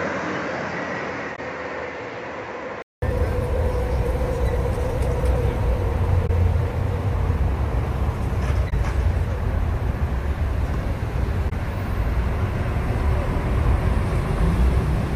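Input switched to a poorer device, likely, from the start to 3.02 s: the opening sound is dull and boxy, with nothing above 7.6 kHz, roughly 10 dB quieter, and carries its own faint background noise well below the signal. A 200 ms silence marks the change back to fuller sound.

Damaged data in a compressed stream is heard at 1.32 s, 6.23 s, 8.66 s and 11.46 s, each a brief glitch lasting about 70 ms. At each one the decoder misreads corrupted frames, loses sync and skips ahead to the next valid frame header.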